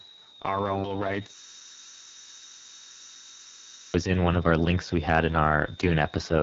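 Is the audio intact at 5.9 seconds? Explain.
No, not at 5.9 s, because two faults run through the whole clip and both are present there. There's a switching supply whistle, a thin high tone somewhere between about 3.55 and 3.87 kHz, sitting about 25 dB below the speech. That comes from a switching power supply cycling in an audible burst mode or beating against another supply.

On top of that, the speech has been through the AMR wideband (HD Voice) codec, and it's heavily damaged. The voice sounds rough and raspy, which fits the lowest 6.6 kbit/s mode, where the pulse-driven vocal tract model has too few bits to rebuild the speech cleanly. The band above 6.4 kHz is filled with shaped noise rather than real detail, and there's nothing at all above 7.3 kHz.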